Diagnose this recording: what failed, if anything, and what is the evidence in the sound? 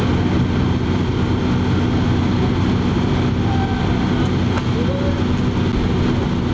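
The signal was driven about 2 dB past the limit of a stage from 5.37 s to 6.19 s, so hard clipping flattened the peaks wherever they exceeded the limit. The squared-off tops generate harmonics that were never in the source, heard as a gritty crackle riding the loudest moments of the sound through that stretch. None of that added energy is present above 8 kHz, since the call microphone processing passes nothing there.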